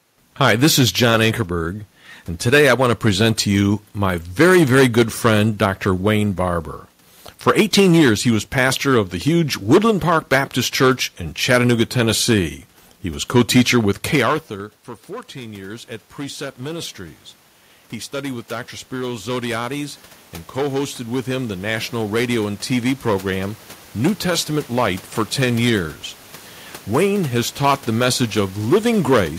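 A speech recording in which a stage in the chain is overdriven by about 12 dB for the whole clip, so hard clipping flattens the peaks on a few percent of samples; the squared-off tops add high harmonics heard as a harsh fuzz on every louder syllable. After the talker moves away from the microphone around 14 s and the input drops by about 20 dB, the automatic gain control reacts with automatic gain rising from 15.07 to 27.6 s, lifting gain by about 17 dB. Voice and room noise swell together slowly through the passage starting just before "the message".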